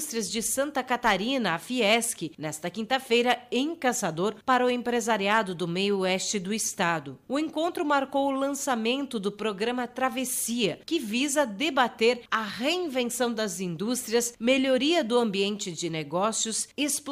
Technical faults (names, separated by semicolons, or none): hard clipping